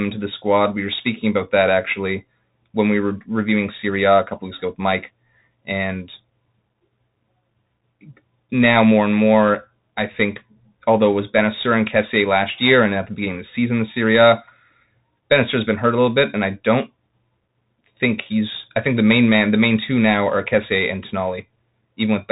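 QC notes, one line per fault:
Throughout, Bluetooth CVSD headset codec: the speech sounds thin and boxed-in, with nothing above 3.8 kHz, scratchy s sounds, a grainy hiss beneath the voice, and roughness on loud bright moments. The signal is coded one bit at a time, each bit only nudging the level up or down by an adapting step, which fits the 64 kbps Bluetooth headset link. Fast high-frequency swings outrun that step and distort, while the constant stepping leaves the granular noise.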